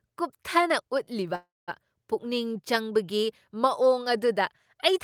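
Speech with a call audio freeze from 1.35 to 1.70 s: the last sound is stretched into a fading buzz or hiss and then about 210 ms of silence, after which speech resumes intact but 323 ms later, likely because delayed packets emptied the jitter buffer.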